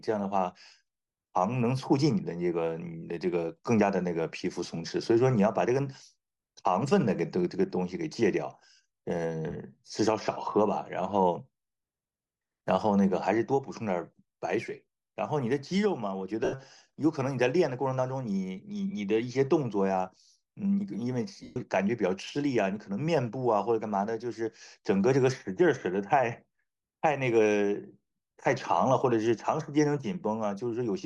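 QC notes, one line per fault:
throughout: Bluetooth LC3 compression, a grainy, breathy edge on the speech where upper frequencies are thinned and noise-filled, likely from a fairly low-bitrate LE Audio link.
16.44–16.54 s and 21.43–21.57 s: lost LE Audio frames, gaps of 82.5 and 127.5 ms where the decoder patches in a noisy smear of the last spectrum that fades out.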